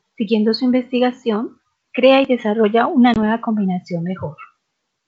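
At 3.14 to 3.17 s, right after "crea y desarrolla una", packet loss on an ADPCM call punches a hard-edged hole of about 20 ms, which fits a single lost packet. The receiver fills the gap with silence, and its adaptive predictor and step size no longer match the sender's, so the speech comes back slightly distorted before settling. On a waveform this is a flat gap with abrupt edges and a distorted restart. A spectrogram shows a clean vertical blank band. The surrounding G.722 wideband audio sounds consistent with 64 kbit/s coding.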